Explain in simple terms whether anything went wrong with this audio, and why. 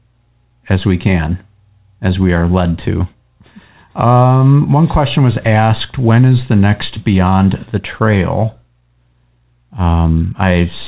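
Nothing went wrong here: the speech simply came through an ordinary call connection, and the lack of anything above 4 kHz is just the narrow, telephone-style range that kind of connection normally carries.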